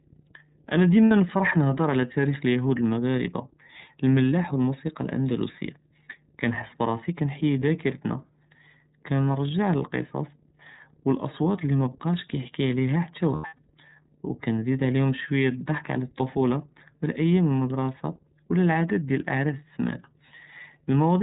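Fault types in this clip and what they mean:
Mains hum: A steady low tone at 50 Hz sits under the speech for the whole clip, about 35 dB below it. A ground loop or a nearby transformer is letting the power line leak into the signal path.
iLBC codec: The speech sounds plainly rough and slightly synthetic, with nothing above 4 kHz. This fits the narrowband iLBC voice codec at its 13.33 kbps mode with 30 ms frames, which encodes each frame's excitation independently.
Lost iLBC frames: The sound smears briefly into a held, buzzy, breathy vowel at 1.06–1.11 s, 7.59–7.62 s, and across 13.35–13.62 s, where the longest stretch is about a tenth of a second. Lost packets left the decoder repeating the last pitch cycle mixed with noise.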